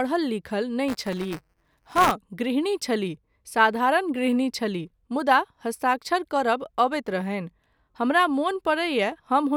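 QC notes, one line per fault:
0.88–2.11 s, buffer tearing: a robotic 188 Hz buzz, fitting a 256-sample buffer, until "गृहणी छलीह". Writer and reader cross each period, splicing a small slice of audio about 10 ms old between hard joins. Unlike dropouts, there are no silent gaps.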